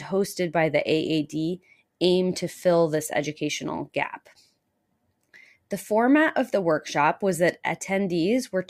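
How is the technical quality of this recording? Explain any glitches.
Nothing in the recording stood out as a technical problem on listening.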